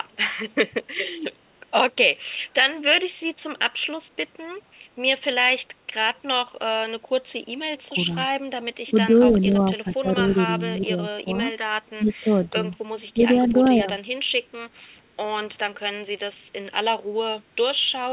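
An echo canceller likely caught in double talk turned the speech down while the far side talked, giving speech suppressed in double talk at 7.89–8.14 s, 8.86–10.06 s, 10.84–11.28 s, 12.0–12.53 s and 13.14–13.18 s. The sound dips by roughly 10 to 15 dB in short bites. There is also echo leak at 12.08–12.49 s and 13.46–13.53 s: likely uncancelled loudspeaker pickup returns a faint copy 467 ms late, about 25 to 30 dB below the speech.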